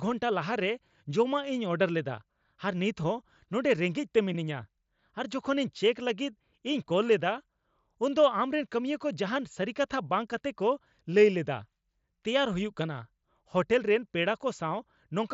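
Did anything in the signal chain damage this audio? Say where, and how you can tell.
No, nothing in the chain damaged this speech. It has passed through a Bluetooth mSBC headset link, which caps the bandwidth at 8 kHz and leaves only a light graininess on the louder syllables, as expected for that codec.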